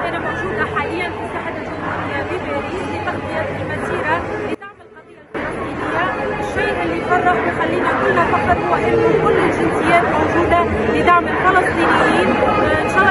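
From 4.55 to 5.35 s the sound drops by about 20 dB. The likely cause is one channel inverted. Shared content cancels when the channels sum to mono.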